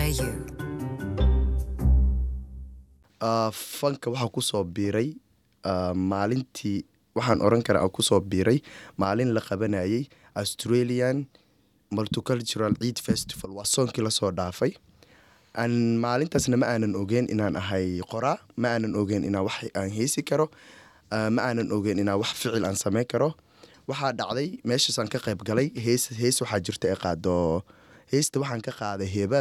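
The audio has two sudden gain jumps. From 7.22 to 9.05 s the level rises by about 6 dB, and from 13.45 to 13.64 s it drops by about 11 dB, with the background noise following each time. This is likely a gain change applied instantly, without a ramp.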